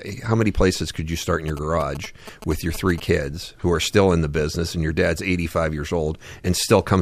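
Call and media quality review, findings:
GSM signalling bursts, 1.48 to 3.0 s, after "could you start in", clearing before "kids who are still". Galloping dit-dit-dit of short 217 Hz buzzes, well below speech level. Nearby 2G handset signalling; RF rectified in the analogue input stage. Unlike steady mains hum, it comes in irregular grouped bursts at 217 Hz rather than a continuous 50/60 Hz tone.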